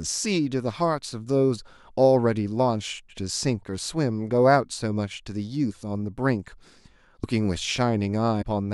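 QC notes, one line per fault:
7.22 s, compressed frames skipped: a few whole frames, each about 23 ms, are not played, so roughly 70 ms of speech vanishes.
8.41–8.43 s, compressed frames skipped: a longer run, around seven frames, drops out and the speech leaps forward by about 150 ms. The 23.2 ms frame length fits 1024-sample frames at 44.1 kHz.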